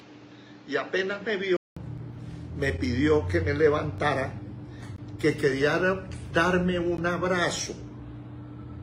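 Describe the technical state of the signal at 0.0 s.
The sound is dull and boxy from 0.0 to 1.77 s, with nothing above 7.6 kHz and a faint new noise floor. A 200 ms silence marks the change. This likely comes from the input switched to a poorer device.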